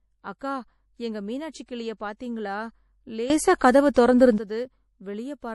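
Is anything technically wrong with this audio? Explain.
Yes, three kinds of fault are audible in this speech clip.

MP3 compression runs through the whole clip. The damage is plainly audible: the sound has a watery, swirling quality, and nothing is present above 11.5 kHz. The likely cause is a lossy encoder short of bits, which fits a low bitrate around 48 kbps. Weak frequency components are dropped and return from frame to frame, and the treble is cut off at a fixed point.

A sudden gain jump occurs from 3.3 s to 4.38 s. The level rises by about 15 dB and falls back at the end. The change happens instantly rather than along a ramp, and the speech and the background noise step up and down together. This is likely due to a gain setting or bit shift applied abruptly in the digital path.

Pre-echo appears twice, from 3.58 to 3.61 s (27 ms) and from 3.94 to 3.96 s (24 ms), both inside the louder section. 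The codec spreads its quantisation noise across a whole block. Where a sharp onset sits late in that block, noise sized for the loud part leaks into the quiet moment before it. A short hiss therefore precedes each attack, and the attack itself sounds smeared.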